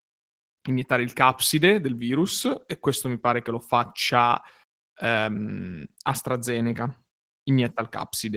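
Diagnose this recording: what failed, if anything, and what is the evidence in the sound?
Opus voice compression, throughout the clip, at the codec stage: the speech carries plainly audible coding damage, a hoarse, slightly robotic texture, consistent with hybrid Opus, where SILK's linear prediction codes the lower band and CELT covers the top, squeezed to a bitrate that fits about 16 kbps.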